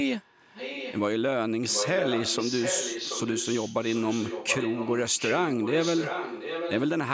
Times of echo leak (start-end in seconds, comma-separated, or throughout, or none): 0.21-1.02, 1.67-6.89